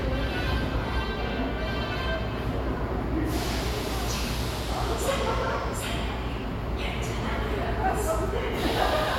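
No technical faults can be heard anywhere in this recording of sounds.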